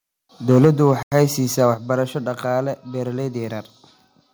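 From 0.49 to 1.24 s the speech has a harsh, crackly edge on its loudest syllables: microphone overload, most likely an input volume set so high that peaks ran about 4 dB past the converter's limit and had their tops flattened, affecting a couple of percent of samples. Unlike codec distortion, the grit follows loudness, appearing only on peaks and vanishing between them.

At 0.65 s, inside that stretch, voice and background drop together by 4 dB in a single step. This is the microphone volume stepped down, likely the call software reacting to the clipping by lowering the device's input gain. Because the background falls by the same amount at the same instant, it is a change in input gain rather than a talker moving back or an automatic gain control easing down gradually.

From 1.03 to 1.12 s the sound cuts to 91 ms of dead silence and then resumes. This is a Bluetooth stall, likely interference delaying packets until the headphones' buffer ran dry. 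The gap is complete silence with a clean restart, with no fade, crossfade or smeared filler, which separates it from a concealed packet loss.

Overload returns briefly from 1.64 to 1.67 s, about 1 dB over, with about one and a half percent of samples clipped. At 1.74 s the level steps down again, this time by 5 dB, once more likely the software lowering the input volume.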